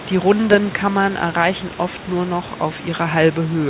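No technical faults are present: the speech arrives band-limited to about 4 kHz by a G.711 A-law call path at 64 kbps, after the usual microphone processing, with room noise sitting about 17 dB and about 34 dB below the speech.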